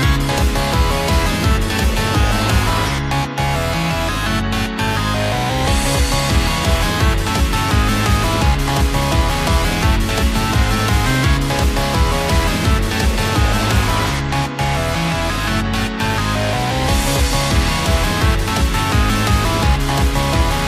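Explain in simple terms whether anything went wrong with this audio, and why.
From 7.27 s to the end, the sound turns rough and metallic. This is periodic clock jitter: the recorder's timing clock was shaken about a thousand times per second.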